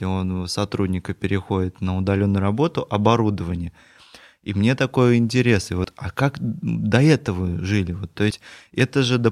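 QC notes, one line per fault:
5.84 s, compressed frames skipped: about one frame, roughly 30 ms of audio, is missing just before "а как до этого". The jump fits a 32 ms frame length. The audio jumps ahead by the length of the missing frame.
8.30 s, compressed frames skipped: a longer gap of about three frames, roughly 100 ms. The audio jumps ahead by the length of the missing frames.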